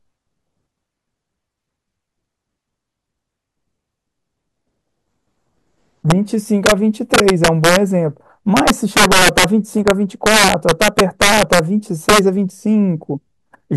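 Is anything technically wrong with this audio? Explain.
Yes. Integer overflow in the speech at 6.10, 6.66–6.72, 7.14–7.76, 8.57–9.44, 9.88–9.91, 10.26–11.59 and 12.09–12.19 s. Peaks exceeding full scale by about 1 to 8 dB (worst at 8.57–9.44 s) wrap to the opposite sign rather than being held at the limit, producing violent cracks far harsher than clipping's flattened buzz.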